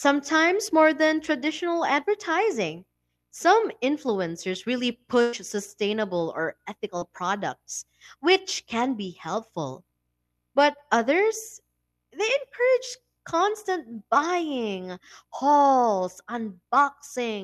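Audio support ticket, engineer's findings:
Burst of packet loss, 5.21–5.35 s: about 120 ms of audio dropped in the jitter buffer/network path. Receiver extends the last sound as a decaying buzz or hiss, then resumes later. Spectrogram shows smeared, repeated content fading out, no true silence.

Short concealed packet loss, 6.99–7.03 s: roughly 20 ms missing, patched by decoder concealment and crossfaded back. Audible as a brief smear or wobble. The spectrogram shows a thin blurred vertical stripe.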